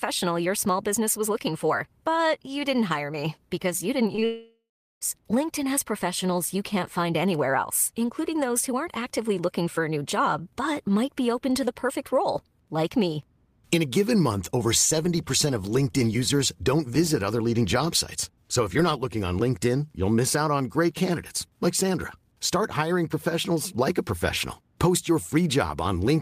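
Right after "me because you didn't", short concealed packet loss hits twice, at 4.15–4.19 s and 4.19–4.23 s, each gap about 20 ms patched by extrapolating the preceding sound. It comes across as a quick smear.

From 4.25 to 5.03 s the sound turns into a fading buzz or hiss, then roughly 0.4 s of near-silence before resuming further on, a likely long network dropout of about 0.76 s. The waveform shows a decaying fill, then a flat line.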